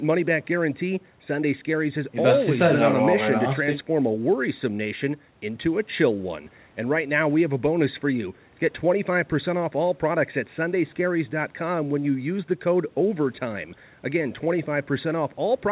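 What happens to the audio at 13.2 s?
Nothing goes wrong at 13.2 s: the speech continues intact through that moment, carrying only the narrowband call-codec sound, with nothing above 4 kHz.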